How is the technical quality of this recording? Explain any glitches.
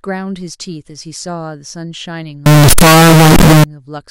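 The recording has one serious glitch. From 2.46 to 3.64 s the speech suddenly turns very loud and harsh, with background noise as loud as the voice, yet pitch stays traceable. This is likely float read as integer: 32-bit float samples interpreted as 32-bit integers, so sign and exponent bits dominate, squaring the waveform at a nearly fixed, high level. Unlike ordinary clipping, quiet passages and noise jump up too.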